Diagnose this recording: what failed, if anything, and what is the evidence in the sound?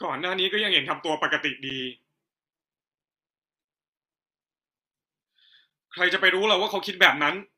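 Two brief, hard-edged holes of silence cut into the speech at 1.70 s and 5.70 s, about 9 ms and 11 ms long. This is a gap between stream segments at playback: the time stamps of adjacent 2-second segments leave a small hole, which the player fills with silence.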